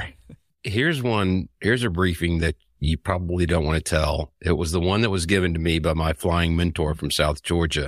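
Nothing in this bit of speech gives a listener anything technical to point at.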